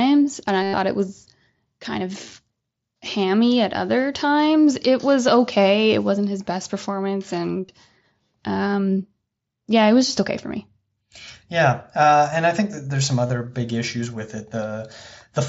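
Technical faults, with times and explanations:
0.63–0.73 s, 7.65–7.69 s and 13.27–13.30 s: concealed Bluetooth headset packet loss. Headset packets went missing: about 105 ms just before "it was kind of", and 30 ms each after "wasn't his best performance" and between "think that there's some" and "big issues with". The receiver filled each gap by repeating the best-matching recent stretch of waveform. Each gap therefore sounds like a buzzy tone held at full level with a slight warble as real audio resumes. A plain dropout would fall silent instead. The light graininess of the mSBC link shows on loud sounds.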